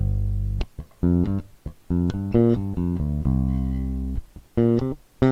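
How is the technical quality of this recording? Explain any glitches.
The technical quality holds up, with no glitches to explain.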